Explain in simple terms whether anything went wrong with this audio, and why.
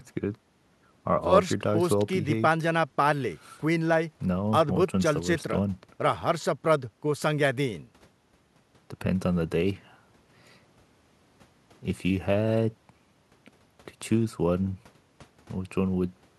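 Nothing went wrong that I could hear: listening to this speech recording, no fault stood out at any point.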